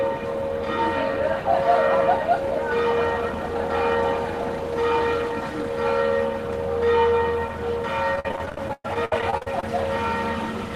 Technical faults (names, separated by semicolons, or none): repeated packet loss (robotic sound)